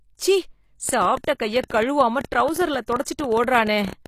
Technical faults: HE-AAC compression; train of clicks; pre-echo

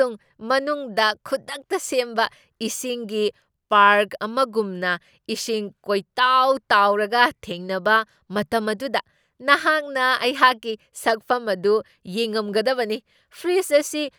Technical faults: none

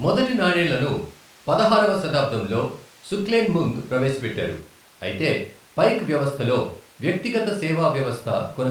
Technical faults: none

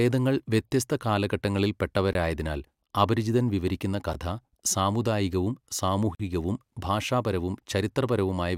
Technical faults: gap between stream segments

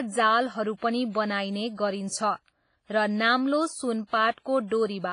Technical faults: WMA compression; pre-echo

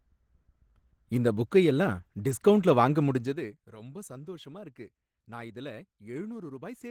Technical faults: Opus voice compression; zipper noise

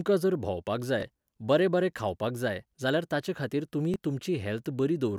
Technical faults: Bluetooth stutter

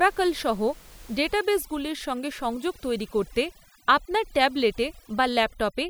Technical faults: overdone noise removal

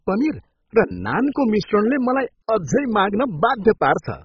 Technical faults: MP2 compression

